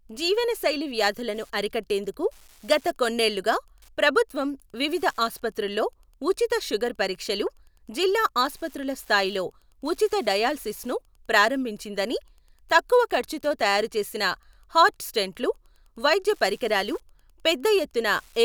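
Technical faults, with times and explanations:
throughout, Wi-Fi interference: faint steady ticking about ten times a second, well below the speech, as the circuit rectifies a nearby radio's 102.4 ms beacon.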